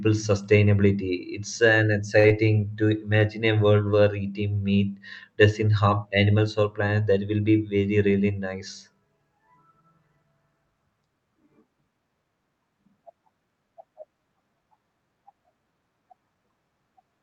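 At 2.19 s, just before "to imagine a", there is a short stall from a late packet. It lasts until 2.26 s. A packet arrived late and the jitter buffer ran dry. The receiver held the last sound for about 47 ms, then resumed exactly where it stopped. Nothing is lost. The preceding sound is simply drawn out, with a faint buzzy sustain, and the delay grows by that same 47 ms.

Right after, from 2.28 to 2.32 s, comes a short concealed packet loss. It also falls just before "to imagine a". About 20 ms of audio never reached the decoder. The receiver patched the gap by extending the last sound and then blended back into real audio. The repair is heard as a brief smear or slight wobble. Any short consonant in that spot may be thinned or gone.

From 7.96 to 8.28 s, just after "will be", there is a jitter buffer speed-up. The buffer held more audio than its target. To shrink the delay, the receiver cut out a series of short pitch-period slices, roughly 40 ms in all. 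The speech plays about 12 percent faster over that stretch. The pitch stays the same. It sounds briefly hurried. The Opus call path is audible throughout as a bandwidth limit at 8 kHz, with a bitrate of about 40 kbps.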